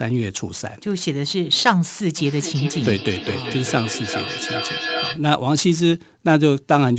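Speech heard over a call path, band-limited to about 8 kHz, with feedback echo between two devices from 2.18 s to 5.25 s. Each phrase returns roughly every 0.4 s, thinner and more ringing with each pass, and the strongest repeats reach about 7 dB below the direct speech. The cause is a second device in the same room playing this microphone's signal back into it. The local echo canceller only removes its own device's playback, so the loop goes unsuppressed.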